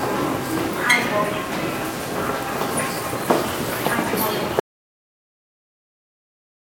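At 4.60 s there's an audio dropout to silence: the sound cuts off mid-flow into silence, no room tone, right through to the end. Likely the input got disconnected or muted while recording carried on.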